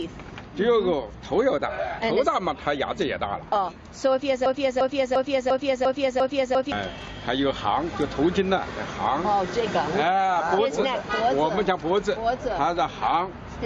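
A broken-record loop runs from 4.46 s to 6.72 s. A fragment about 0.35 s long plays six times in a row, each repeat identical and butted against the last, producing a stuttering, mechanical pulse. This is likely a stall in the player, encoder or stream, which kept resending the last chunk it held instead of fresh material. Whatever sound belonged in those two-plus seconds never arrives; it is replaced by the loop.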